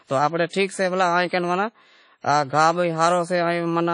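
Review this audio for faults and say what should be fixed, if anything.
The speech rings and sounds washy throughout. A hiss swells and fades with the voice. Nothing is present above 10.1 kHz. This is likely WMA compression: long transform blocks smear quantisation noise across tens of milliseconds, which fits a bitrate near 32 kbps. Re-encode from the original source at a higher bitrate, or with a modern codec.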